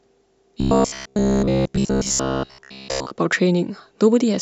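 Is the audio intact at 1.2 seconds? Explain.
No. At 1.2 seconds the speech is inside a stretch of robotic sound from repeated short buffers running from 0.61 to 3.11 s. It has a rigid, metallic buzz near 66.7 Hz that still loosely tracks the speech. The likely cause is fresh audio arriving too rarely, so roughly 15 ms chunks, fitting that buzz rate, are replayed over most of the span. Unlike a stutter, each repeat is too short to hear separately, so they fuse into a fixed pitch.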